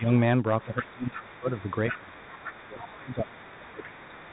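From start to finish the speech carries a Bluetooth CVSD headset codec sound. Nothing passes above 3.9 kHz, so a spectrogram shows a hard ceiling there. Sibilants turn scratchy, loud bright moments distort as the one-bit 64 kbps stream's adaptive step falls behind, and a granular hiss fills the gaps.

Speech suppressed in double talk begins at 0.0 s, with a shallow dip of about 5 dB lasting until 0.09 s. From 0.6 s to 3.51 s, a second voice leaks through about 20 dB below the talker. This is the other side's voice leaking through, likely because the echo canceller left loudspeaker sound in the microphone signal. On a spectrogram it appears as faint, independent harmonic traces running beneath the main speech.

While that leak is present, the canceller likely mistook the overlap for echo and turned the talker down. Speech sinks by up to about 15 dB between 0.65 s and 1.49 s and by up to about 25 dB between 1.91 s and 2.27 s. 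It drops by up to about 20 dB again from 2.64 s to 4.31 s. The waveform envelope caves in over these stretches. Leakage returns from 3.78 s to the end at about 20 dB down, overlapping the last dip. Beneath all of this, the call microphone's high-pass trims only the lowest bass.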